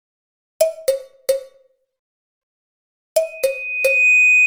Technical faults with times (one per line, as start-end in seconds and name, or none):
2.03-2.41 rebuffering stall
3.22-4.46 loudspeaker feedback squeal